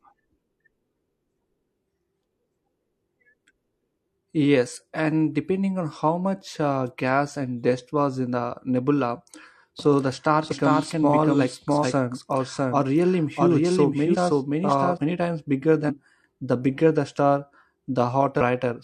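From 9.79 s to 14.97 s the speech is heard twice, with a second copy at about the same loudness trailing roughly 0.7 s behind. It is clean, with no reverb tail, and cuts in and out abruptly. This is a doubled audio track, likely from a slower second capture path.

Within and after that stretch, at 10.48–10.53 s, 11.80–11.85 s, 14.10–14.16 s, 15.85–15.90 s and 18.37–18.41 s, the speech jumps ahead, losing roughly 300, 200, 150, 500 and 400 ms. These are compressed frames skipped: whole frames, consistent with 42.7 ms each, were not played.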